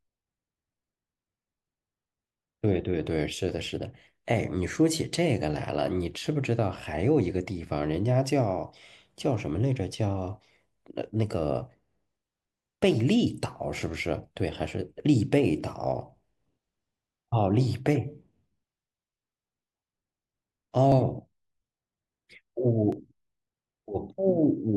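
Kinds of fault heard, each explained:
periodic USB or driver dropouts: a background task stalls the USB bus or audio driver every 2 s, skipping about a millisecond of speech each time, heard as regular ticks between 12.9 and 22.9 s.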